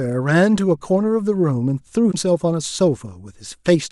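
At 2.08 to 2.15 s the speech breaks into a brief glitch, damaged data in a compressed stream: corrupted bytes make the decoder misread frames and lose sync for about 70 ms.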